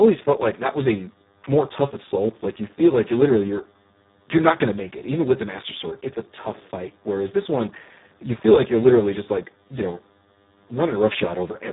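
From the first second to the end, a DECT cordless phone buzz runs under the speech. A nearby handset or base station sends a radio burst every 10 ms, and the audio circuitry rectifies that pulse train into sound. The result is a steady, thin buzz at 100 Hz with a stack of harmonics above it. It sits roughly 35 dB below the speech and stays constant whether anyone is talking or not.

The whole clip also carries heavy Speex codec damage, at a data rate that points to about 4 kbps. With so few bits, this CELP speech coder has little left to describe the excitation, so the voice comes out noisy and hoarse, with a grainy, synthetic edge instead of a clean tone. Nothing survives above 3.8 kHz, so the speech sounds band-limited and muffled, like a narrowband phone call.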